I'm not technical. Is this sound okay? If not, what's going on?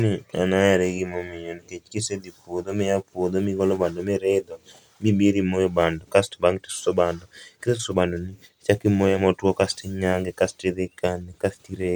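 Yes, no faults are audible.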